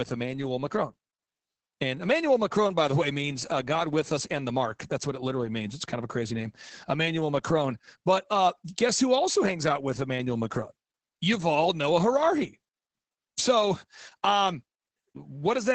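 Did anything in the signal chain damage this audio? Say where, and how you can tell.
Yes, at the codec stage, throughout the speech. It is Opus voice compression in SILK linear-prediction mode. The band stops at 8.5 kHz, a wideband limit. Coarse excitation coding leaves the speech muffled, hoarse and slightly robotic, which fits about 10 kbps.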